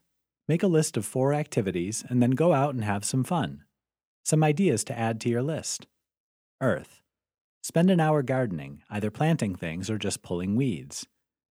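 No technical faults are audible.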